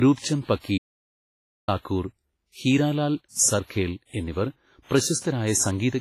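Throughout the speech, the sound rings and washes, with a hiss that swells and falls with the signal and nothing above 15.4 kHz. This is heavy damage, likely from WMA compression at a low bitrate, which fits roughly 24 kbps. Quantisation noise from long transform blocks smears across tens of milliseconds, and weak components are zeroed.

From 0.78 s to 1.68 s, right after "രൂപ്ചന്ദ് പക്കി", the audio drops out to silence for about 0.9 s. The gap holds no room tone at all, and the speech cuts off and resumes mid-flow. The likely cause is a lost input while silence continued to be written.

At 5.20 s, an attack is preceded by about 42 ms of pre-echo, a brief hiss ahead of the onset that leaves the attack soft. The attack fell late in a transform block, so noise sized for the loud part was spread into the quiet stretch before it.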